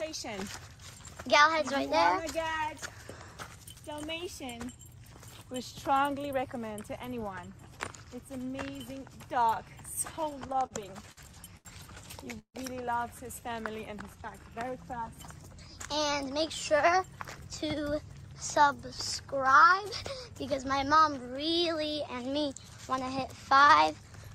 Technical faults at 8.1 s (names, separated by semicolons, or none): none